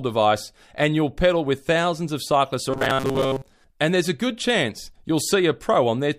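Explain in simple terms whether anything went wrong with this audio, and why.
Right after "with thousands of cyclists", from 2.71 to 3.44 s, the speech turns into a metallic 134 Hz buzz: robotic sound from repeated short buffers, likely from audio arriving too slowly.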